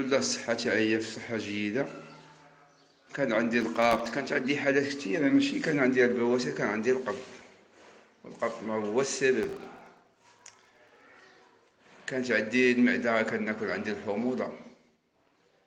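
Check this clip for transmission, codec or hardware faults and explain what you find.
Processor overload crackle appears twice, from 3.61 to 4.09 s and from 9.43 to 11.01 s. Tiny buffers, under a millisecond each, repeatedly miss their deadline. Each miss drops a hard-edged silent gap, giving gritty crackle.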